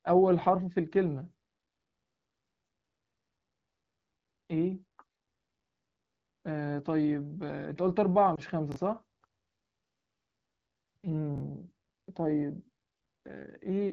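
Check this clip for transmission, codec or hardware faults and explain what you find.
Two kinds of transmission fault are audible, both in the second half of the speech, carried over an AMR wideband (HD Voice) codec whose light coding texture is consistent with a rate around 12.65 kbit/s.

From 8.35 to 8.40 s there are lost AMR speech frames, a single 20 ms frame in this case. The frame failed its error check, so the decoder filled the gap by repeating the previous pitch and vocal tract parameters at reduced gain. With only one frame concealed, the result is a short dip or warble rather than a fade, and the speech recovers weak for a moment.

Chunks out of order occur at 8.72 to 8.76 s and again at 11.36 to 11.40 s. In each case a 20 ms chunk arrived or was written one chunk late, so it plays after the chunk that should have followed it. No audio is missing, but the swap creates hard joins at the chunk boundaries. 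Each instance is heard as a brief jumbled moment.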